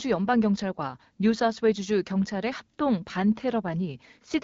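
A speech recording carried over the AMR wideband (HD Voice) codec at 12.65 kbit/s, with nothing technically wrong with it.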